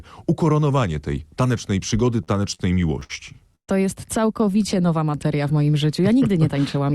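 From 2.23 to 3.11 s, repeated stalls (stutter): late packets emptied the jitter buffer six times, each gap up to 59 ms, filling about 180 ms with nothing lost, so the audio drags and stutters.

At 3.55 to 3.70 s there is a call audio freeze: a 126 ms gap, mostly silent, then the audio resumes where it stopped, likely from packets held up in transit.

From 4.40 to 4.86 s, a jitter buffer slow-down repeats pitch periods to rebuild reserve, adding 51 ms and running at 90% speed, with drawn-out sound at unchanged pitch.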